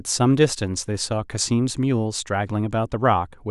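No technical faults can be heard anywhere in this speech recording. Nothing in it calls for a timestamp or an explanation.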